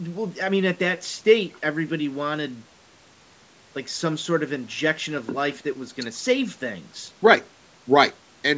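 Speech with no technical faults.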